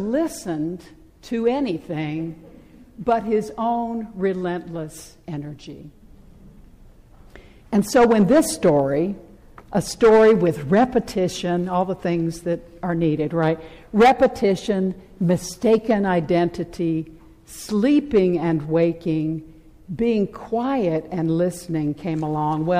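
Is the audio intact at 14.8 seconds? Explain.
No. Hard clipping runs through the whole clip: the signal is driven about 11 dB past what a stage can pass, so peaks are cut flat, adding harsh crackle on loud moments.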